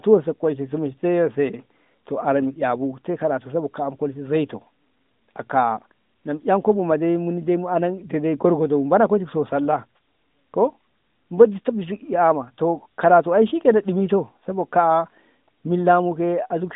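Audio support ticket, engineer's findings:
Engineer's findings: no audio faults found on this ticket.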